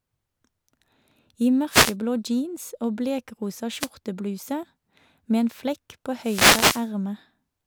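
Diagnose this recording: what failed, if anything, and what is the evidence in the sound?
Three short bursts of hiss sweep across the speech, at 1.69 to 1.95 s, 3.78 to 3.89 s and 6.18 to 6.90 s, the last lasting about 0.7 s. These are wireless microphone noise hits, a failure in the analogue radio link ahead of the converter. The FM signal dropped briefly as reflected paths cancelled at the receiver antenna, so the receiver's own noise rose and partly buried the speech until the signal recovered.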